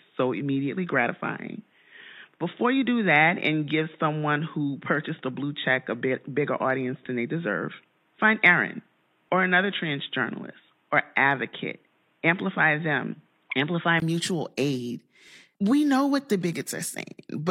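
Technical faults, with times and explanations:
0.00–14.02 s, input switched to a poorer device: the recording likely came through a narrower-band input, so nothing reaches above 3.8 kHz and the sound stays dull, with its own background noise about 45 dB down. The level barely changes, and a 20 ms gap at 14.02 s comes just before "mutual aid", after which the full band returns.
15.28–15.31 s, overlap between stream segments: two segment timestamps overlapped, fitting 6-second segments, so about 36 ms was cut just after "mutual aid", heard as a tiny skip.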